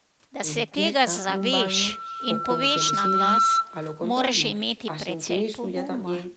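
Echo with no canceller runs from the start to the end of the clip. The far end's loudspeaker is feeding back into its microphone, and nothing removes it. Each phrase of speech returns about 27 dB quieter, roughly a third of a second later, as a thin shadow.

Loudspeaker feedback squeal runs from 1.15 s to 3.69 s. A microphone is picking up the loudspeaker it drives, and at 1.3 kHz the loop gain exceeds one. A single tone swells over about two seconds until it sits about 5 dB above the speech, then stops. Throughout, nothing reaches above 8 kHz, consistent with the call's codec bandwidth.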